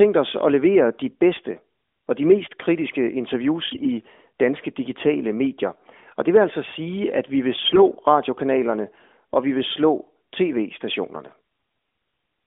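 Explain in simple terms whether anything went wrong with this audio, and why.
Two short bursts of AMR bit errors, at 3.70–3.88 s and 7.64–7.83 s, turn the speech briefly hoarse and gargly. Some of the less protected bits in the narrowband phone encoding arrived flipped, about eight 20 ms frames each time, with the second burst more heavily corrupted.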